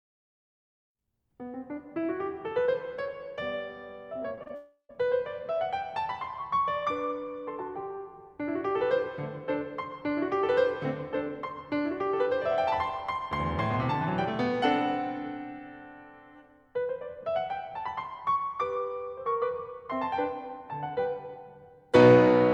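Short concealed packet loss occurs three times in quick succession, at 4.35, 4.43 and 4.48 s. Each time about 20 ms of the music failed to arrive, and the receiver patched the hole by extending the preceding sound, so the music briefly smears or wobbles.

Long network dropout runs from 4.55 to 4.91 s. The music gives way to a fading continuation of its last sound, then about 120 ms of near-silence, and returns with roughly a third of a second missing, likely because the stream stopped arriving altogether.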